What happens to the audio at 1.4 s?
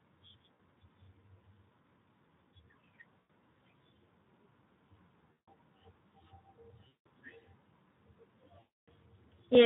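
At 1.4 s the speech carries Speex codec damage, present throughout the clip: too few bits for the excitation leave it plainly hoarse and noisy, fitting a low setting near 11 kbps. A spectrogram shows blurred, grainy harmonics with noise filling the gaps between them.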